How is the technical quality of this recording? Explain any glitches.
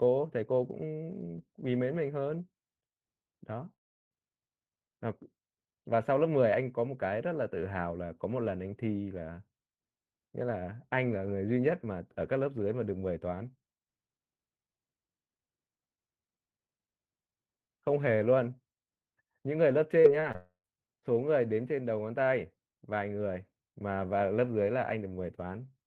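The speech is marred by two audible interruptions and a cluster of brief glitches. At 3.73 to 4.13 s and 20.36 to 20.66 s, a long network dropout likely cut off the incoming audio. The receiver stretches the last sound into a fading buzz, then leaves near-silence for about 360 ms and 90 ms respectively. At 20.01 to 20.06 s, 20.20 to 20.24 s and 20.32 to 20.36 s, short concealed packet loss leaves 20 to 40 ms gaps that are patched from the preceding sound, heard as quick smears or wobbles.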